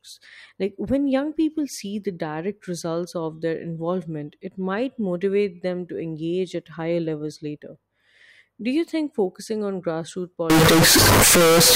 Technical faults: float read as integer

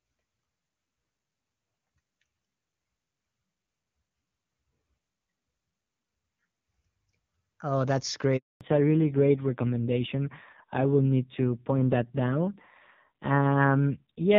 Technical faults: handover gap; fallback to narrowband

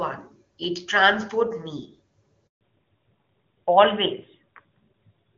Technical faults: handover gap; fallback to narrowband

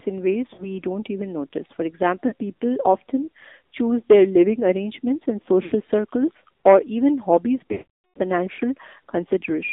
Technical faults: AMR narrowband mobile codec; lost AMR speech frames

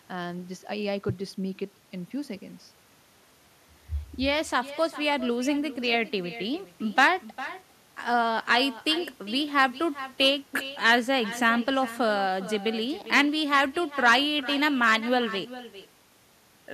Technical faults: echo with no canceller

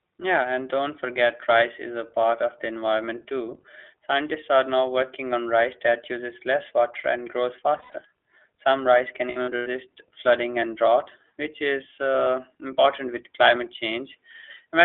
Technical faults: iLBC codec; lost iLBC frames

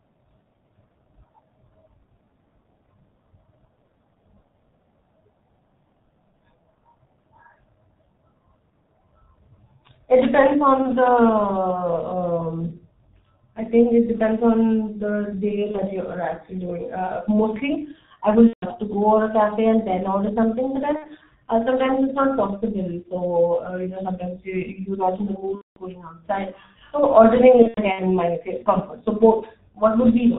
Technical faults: G.723.1 codec; VoIP packet loss concealed by the speech codec

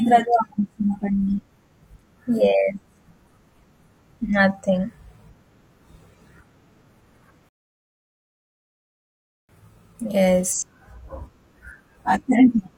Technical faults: rebuffering stall

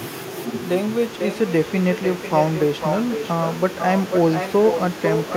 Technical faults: echo with no canceller

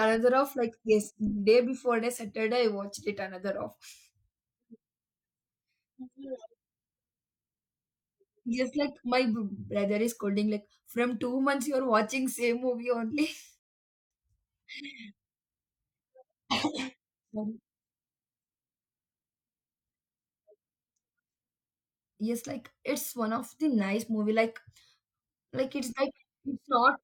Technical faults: rebuffering stall

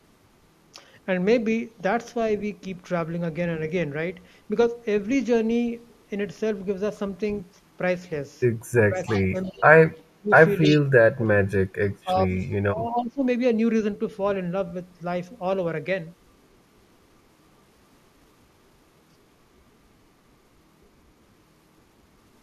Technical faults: speech suppressed in double talk; echo leak

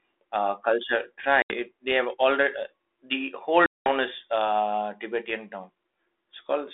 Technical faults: packet loss on an ADPCM call

